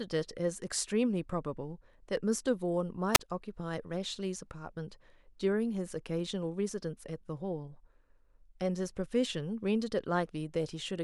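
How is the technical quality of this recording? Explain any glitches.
There is one glitch in the speech, at 3.14 to 3.20 s: a short burst of hiss gives way to a hole of near silence lasting about 36 ms before the sound comes back. This is a wireless microphone squelch dropout. The FM radio signal weakened enough that the receiver's squelch muted its output.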